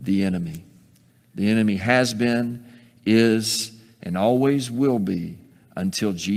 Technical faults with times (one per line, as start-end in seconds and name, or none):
none